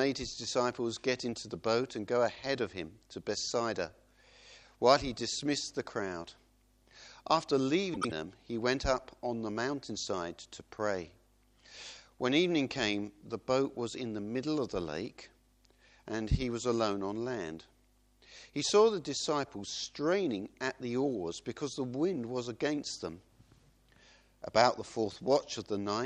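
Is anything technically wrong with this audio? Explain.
Yes. From 7.94 to 8.12 s there is a case of frames out of order. Two adjacent blocks of about 78 ms each were decoded in swapped order, which fits runs of three frames. That stretch plays as a garbled flutter, and no time is lost.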